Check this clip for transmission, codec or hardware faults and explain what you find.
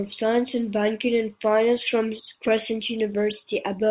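No transmission, codec or hardware faults turn up in the speech, which comes through the ordinary mu-law G.711 telephone path at 8 kHz, so nothing is heard above 4 kHz and a faint quantisation noise rides about 38 dB below the signal, rising and falling with its level.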